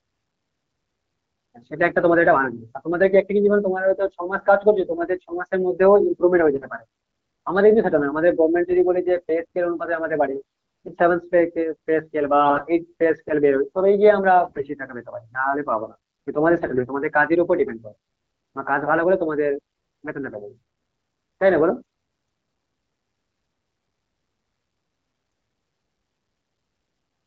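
AMR bit errors hit the speech at 4.80–4.98, 6.54–6.66, 10.34–10.94, 12.44–12.68, 14.44–14.64 and 16.54–16.88 s. Flipped low-priority bits misplace the excitation pulses and skew the pitch, gain and spectral values, so the speech briefly turns hoarse and gargly while keeping its level. This fits an error rate of a few percent.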